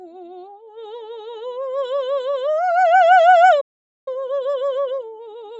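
Throughout the music, a speech-tuned noise suppressor applied to music rides held tones and tails down by around 5 dB, so the level pumps. Unlike a compressor, it spares the attacks. From 0.57 to 0.77 s, a sound cut by the noise suppressor sinks by about 10 dB. It is a brief, deeper dip in one sound rather than the general pumping. From 3.60 to 4.08 s, a playback stall leaves about 0.46 s of silence. This was likely caused by the player running out of data, and it is a clean gap, not a fade or dropout noise. From 4.08 s to the end, time-compressed catch-up runs at 1.15 times speed, hurried at unchanged pitch, unlike a faster tape-style speed-up. The call's microphone processing takes out the lowest bass, which is normal for it.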